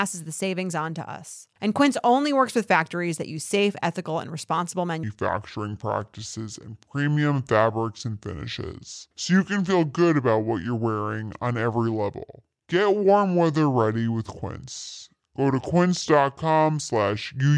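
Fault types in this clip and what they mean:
Wrong sample rate: from 5.03 s, after "safe ethical and responsible", audio recorded near 32 kHz plays back around 22 kHz, running at 0.69× speed and about 6.5 semitones low.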